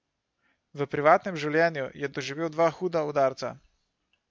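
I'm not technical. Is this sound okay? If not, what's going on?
Yes, there's nothing technically wrong with this recording; the signal arrives intact and steady, with no breaks, glitches or damage anywhere in the speech.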